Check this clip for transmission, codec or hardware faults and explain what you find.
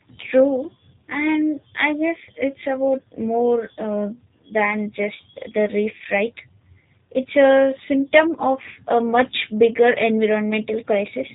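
There's one fault, and it runs the whole way through: G.729 codec damage, plainly audible. The codec rebuilds the speech from a vocal tract model, pitch prediction and a few pulses per frame, which fits 8 kbit/s. So it sounds rough and faintly synthetic, with nothing above about 3.8 kHz.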